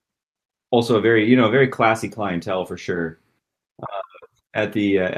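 Nothing in this speech recording stood out as a technical problem on listening.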